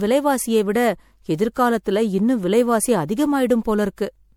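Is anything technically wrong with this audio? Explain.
Yes. Throughout the speech there is generation loss. The sound is swirly and hollow, with smeared, watery textures and consonant attacks that blur rather than snap, more degraded than a single moderate-rate encode would leave it. The likely cause is repeated MP3 encoding, roughly four passes at a setting that fits about 96 kbit/s. Each pass requantises on a shifted frame grid, so noise and spectral holes accumulate, even though content still reaches about 20.6 kHz.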